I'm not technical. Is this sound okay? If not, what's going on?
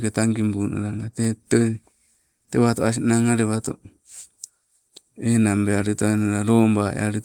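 Yes, the speech recording is fine: nothing in it is broken, interrupted or distorted.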